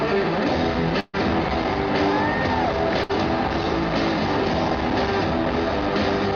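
Burst of packet loss at 1.00 to 1.16 s and again at 3.03 to 3.11 s. About 140 ms, then 60 ms, drops out, covered by a fading smear of the last sound before it jumps ahead.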